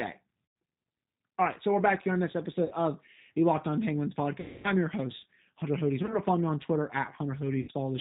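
G.729 codec damage runs through the whole of this speech recording: nothing above 4 kHz survives, and the sound has a slightly rough, synthetic edge, which fits G.729A at 8 kbit/s. That codec doesn't carry the waveform itself. It rebuilds each 10 ms frame from a vocal tract filter, a pitch predictor and a handful of pulses, so fine detail is replaced by a modelled approximation. VoIP packet loss concealed by the speech codec interrupts it five times: at 0.46–0.56 s (100 ms), 2.65–2.74 s (60 ms), 4.40–4.73 s (240 ms, the longest), 6.03–6.19 s (short drops scattered across the span, the longest about 30 ms), and 7.62–7.71 s (60 ms). In each gap the decoder keeps extending its last pitch and filter settings while lowering the gain, so the missing audio becomes a buzzy or tinted tone that fades. Because every frame depends on the one before, the sound stays weakened or distorted briefly after real packets resume.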